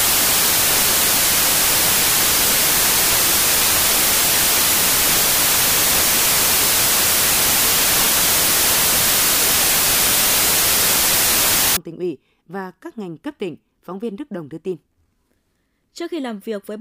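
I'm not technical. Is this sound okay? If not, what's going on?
No. Samples built from the wrong bytes, from the start to 11.77 s, just before "tỉnh ủy và các": the player joins each sample's bytes the wrong way, so tiny fast-changing details become huge, and the speech comes with loud, harsh hiss.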